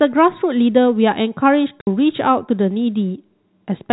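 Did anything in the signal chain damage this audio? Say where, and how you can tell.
Yes. At the network stage, packet loss filled with silence leaves a hard 60 ms hole from 1.81 to 1.87 s. This fits six 10 ms packets going missing. Unlike concealment, nothing is repeated or faded across the gap, only dead silence.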